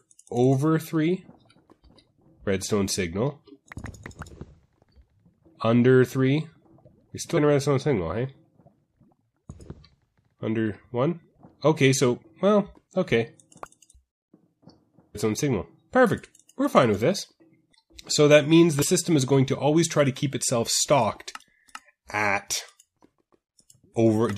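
At 7.36 s, 13.91 to 13.95 s, 15.14 s and 18.81 to 18.85 s, compressed frames are skipped: roughly a tenth of a second of audio, slightly less at 18.81 s, never plays, so the sound lurches forward. Spectrograms show abrupt content discontinuities.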